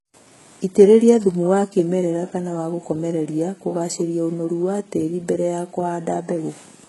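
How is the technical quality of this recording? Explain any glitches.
The recording has one fault, present the whole way through, and it is heavy.

HE-AAC compression, throughout the clip: the sound is strongly band-limited, with nothing above about 11.5 kHz, and the upper range has a synthetic, smeared quality that points to a very low bitrate, around 12 kbps. The likely cause is HE-AAC encoding, which codes only the lower spectrum and rebuilds the top by copying lower bands upward under a rough envelope. Those rebuilt highs don't match the real harmonics, so sibilants in the speech come out gritty, metallic and lisping.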